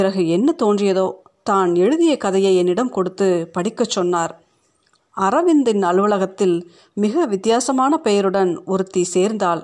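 No technical faults can be heard anywhere in the recording. The speech continues without any audible break or disturbance.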